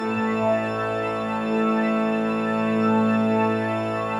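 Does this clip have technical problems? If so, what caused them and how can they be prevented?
No technical faults are audible.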